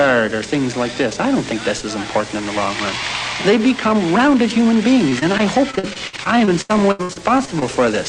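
From 5.09 s to 7.63 s the audio breaks up with repeated packet loss, giving a robotic sound. Close to twenty short holes fall in this stretch, each lasting up to 81 ms. The receiver patches each hole by stretching the last sound it had. About a fifth of the span is patched this way. The result is choppy and robotic, with small pieces of sound missing in quick succession.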